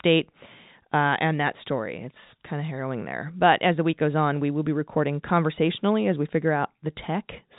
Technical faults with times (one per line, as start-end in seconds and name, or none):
none